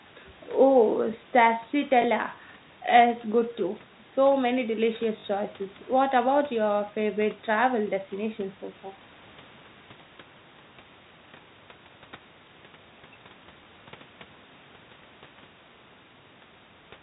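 Speech with packet loss with the last packet repeated at 2.02 s, 5.20–5.24 s and 13.64 s. Instead of silent gaps, repeated audio fills each 20–40 ms hole: small blips at 2.02 s and 13.64 s, and a short robotic stutter at 5.20–5.24 s.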